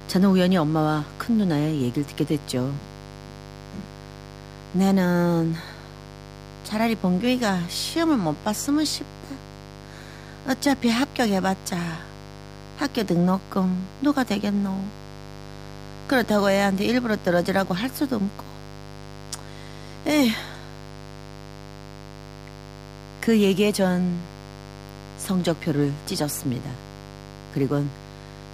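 A steady, raspy mains buzz runs under the speech throughout. Switching spikes from 50 Hz power add harmonics into the kilohertz range, sitting roughly 20 dB down.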